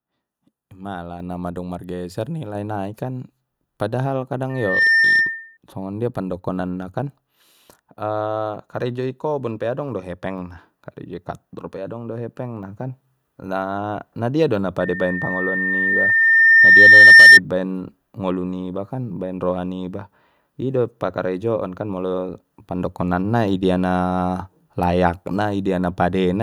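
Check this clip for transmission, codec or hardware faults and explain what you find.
Two faults turn up in this speech clip: a microphone volume step and two bursts of loudspeaker feedback squeal.

At 1.2 s, just before "na madung margeser", the microphone volume steps up by about 6 dB. The input gain was raised in a single jump, so the voice and the background noise get louder together. On a waveform the whole envelope, including the noise floor, steps up at that point.

Loudspeaker feedback squeal occurs from 4.49 to 5.57 s, after "nai kan padahal", and again from 14.80 to 17.40 s, between "na dia do na" and "baen ngolu niba kan". Both are a 1.8 kHz tone about 15 dB above the speech. The microphone is picking up its own loudspeaker, and at that frequency the loop gain exceeds one. The first squeal swells in roughly a third of a second, and the second builds slowly over about three seconds. 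On a spectrogram each shows as a bright horizontal line at 1.8 kHz that thickens as it grows.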